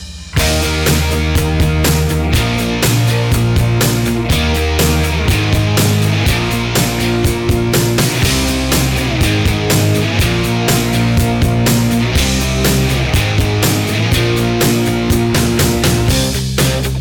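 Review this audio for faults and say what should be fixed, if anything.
Harsh, fuzzy distortion rides on every loud moment from start to finish, with a gritty crackle wherever the level peaks. This is hard clipping. The signal is driven about 9 dB past what a stage in the chain can pass, so the peaks are sliced flat. Around 7 percent of the samples sit on that ceiling, and the squared-off tops throw harmonics high into the spectrum, which is the rasp heard throughout the clip. To prevent it, lower the gain ahead of the overloading stage so the peaks keep headroom below full scale, or use a limiter before that point.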